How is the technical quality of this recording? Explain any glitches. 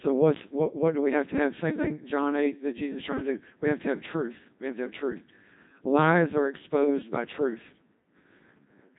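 Robotic, buzzy speech runs through the whole recording, with nothing above about 3.8 kHz. That is Codec 2 vocoder damage, and heavy: only pitch, voicing, energy and a coarse spectral envelope survive, and the voice is rebuilt from sine waves. The thin, synthetic character points to roughly the 2.4 kbit/s mode.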